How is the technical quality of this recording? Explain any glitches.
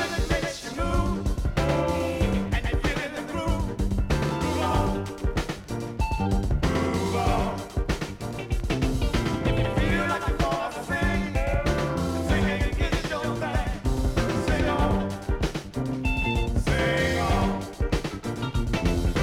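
The recording has one fault that persists throughout. Doubled audio track, whole clip: a full-band copy trails about a tenth of a second behind at roughly 5 dB lower, likely from a second, slower capture path. The waveform shows every transient echoed, and the spectrogram shows each onset repeated, with no decay.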